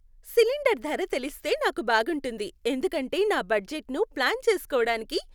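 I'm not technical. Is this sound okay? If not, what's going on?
Yes, this sound is okay; nothing in it is going wrong.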